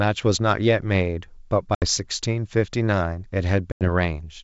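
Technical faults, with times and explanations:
1.75 to 1.85 s: packet loss on an ADPCM call. A hard-edged gap of about 70 ms opens where a run of packets, roughly seven, went missing and was filled with silence. Because ADPCM sends only differences from a running prediction, the receiving decoder's predictor and step size no longer match the sender's when audio resumes, so the speech comes back with some distortion before the two states converge.
3.72 to 3.89 s: packet loss on an ADPCM call. A longer silent hole of about 90 ms, around ten packets, cuts the speech abruptly. The same mismatch follows. The adaptive predictor and quantiser step size in the decoder have drifted from the encoder's during the gap, so the returning signal sounds briefly distorted until the decoder resynchronises. The G.722 coding at 64 kbit/s keeps the wideband detail up to 7 kHz around these gaps.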